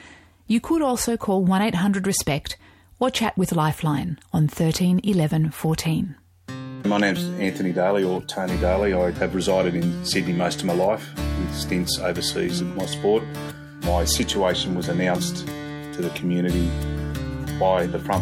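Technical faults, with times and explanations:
Nothing technical stands out here; the sound carries along without any hiccups worth flagging.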